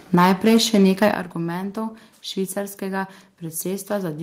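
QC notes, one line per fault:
0.14–1.08 s, microphone overload: The loudest syllables have a harsh, crackling edge. Peaks run about 6 dB past the converter's limit, and a few percent of samples have their tops flattened. The likely cause is an input volume set too high.
0.15 s and 1.14 s, microphone volume stepped down: Voice and background both drop abruptly, by about 4 dB, then by about 10 dB just after the distorted stretch ends. This is likely the call software cutting the device's input volume in steps after detecting clipping.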